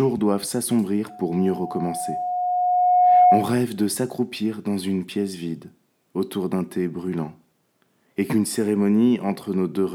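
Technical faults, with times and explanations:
1.09 to 3.58 s, loudspeaker feedback squeal: a single 724 Hz tone swells over about two seconds until it stands roughly 10 dB above the rest of the sound. The microphone was picking up its own loudspeaker, and at 724 Hz the loop returned more than it received, so that frequency fed on itself. The steady build from nothing sets it apart from hum or an inserted test tone, which start at full level.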